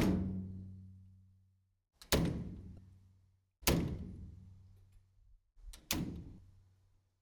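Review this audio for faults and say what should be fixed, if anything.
Damaged data in a compressed stream at 2.75–2.78 s and 6.35–6.38 s: corrupted frames make the decoder lose sync, giving brief glitches seen as broadband vertical streaks and abrupt waveform breaks. Fix by re-fetching or re-encoding from an intact source, with checksums on transfer.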